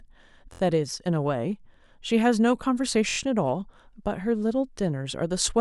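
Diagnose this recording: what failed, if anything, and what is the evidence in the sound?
A repeated buffer fault at the driver or buffer stage: the speech stutters at 0.53 to 0.60 s and again at 3.09 to 3.18 s. The same 23 ms piece replays three and then four extra times, which fits a 1024-sample buffer. On a spectrogram it shows as identical tiled slices with vertical seams, and the waveform shows abrupt joins.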